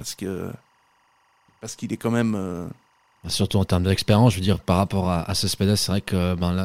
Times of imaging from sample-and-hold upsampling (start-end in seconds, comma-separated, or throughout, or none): none